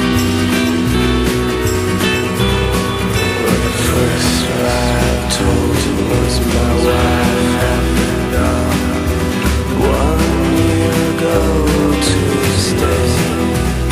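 The audio carries a doubled audio track from start to finish. A second full-band copy trails the original by about half a second, somewhat quieter. It has no decay or room colour. The likely cause is a second capture path or an edit holding two copies out of step.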